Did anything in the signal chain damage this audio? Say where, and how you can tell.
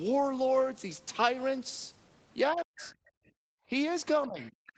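Yes. Speech suppressed in double talk at 2.53–2.82 s and 4.26–4.52 s: the waveform envelope collapses, roughly 40 dB then 20 dB, likely from echo-canceller call processing.

The other side's voice leaking through, faint, around 20–25 dB below the talker, at 2.8–2.92 s, 4.42–4.51 s and 4.67–4.72 s; likely uncancelled loudspeaker echo, showing as stray harmonic traces.

Background gated by the echo canceller from 3.1 to 3.69 s: room noise drops about 40 dB, a dark gap in the spectrogram's noise floor until release.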